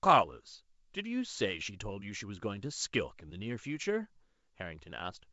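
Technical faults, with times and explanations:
No technical faults found; the G.722 wideband coding at 64 kbit/s carries the speech up to 7 kHz, leaving at most a faint trace of the coder in the upper band.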